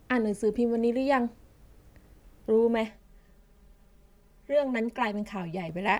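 From about 2.88 s to 5.69 s the speech goes hollow and phasey: that's channel delay (comb filtering). One channel runs around 5 ms late, and summing to mono cancels shared content at fixed notches starting near 100 Hz, spaced evenly upward.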